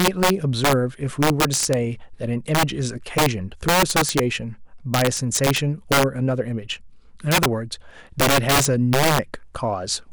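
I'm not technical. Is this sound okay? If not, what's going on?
No. The speech has integer overflow, heard as harsh, violent cracks in the loudest parts. When the level went past the highest number the audio could hold, it wasn't capped. It wrapped around and jumped to the opposite extreme. That is far sharper than ordinary distortion. It happens from 0.0 to 0.73, 1.23 to 1.73, 2.55 to 2.63, 3.18 to 3.26, 3.69 to 4.19, 4.94 to 6.03, 7.32 to 7.46 and 8.20 to 9.19 seconds.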